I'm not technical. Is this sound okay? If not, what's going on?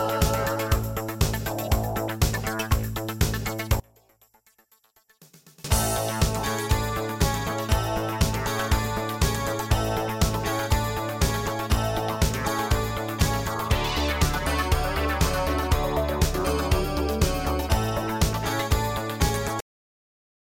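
No, two things go wrong. From 3.80 to 5.64 seconds the sound nearly vanishes, leaving a faint ghost, likely because one channel inverted and cancelled the other. Then at 19.60 seconds it just stops dead mid-sound into silence: a cut-off end, where the last bit never got played.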